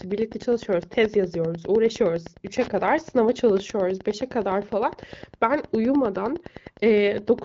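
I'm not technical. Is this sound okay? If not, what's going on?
No. Under the speech there is a steady, faint ticking, about ten small clicks every second, running from start to finish. This is Wi-Fi interference. A Wi-Fi radio sitting close to the recording equipment sends out a short signal roughly every tenth of a second, and the audio circuitry picks up each one and turns it into an audible tick. It sits somewhat below the speech.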